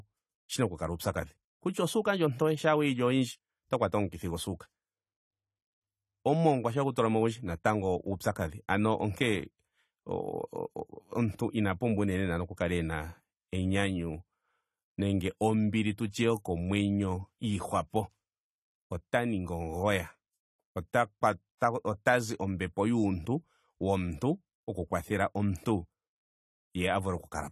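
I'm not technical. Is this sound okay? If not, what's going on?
No. Throughout, the speech sounds dull and smeared, with a warbling or fizzy edge on hissy consonants like s and sh. The very top of the sound is missing; nothing reaches above about 14 kHz. That is AAC compression damage, and the likely cause is that the recording was squeezed into a small file. To save space, the encoder threw away the highest sounds and coarsely approximated the rest, which leaves that muffled, swirly texture.

At about 21.57 s, just before "ota zi ombepo yuuntu", there is a brief hiss lasting about 40 ms, and the start of the next sound is softened rather than crisp. This is pre-echo. The encoder handles sound in short chunks and spreads its errors evenly across each one. Here a sudden loud onset came late in a chunk, so the noise meant to hide under that loud part spilled into the quiet moment just before it.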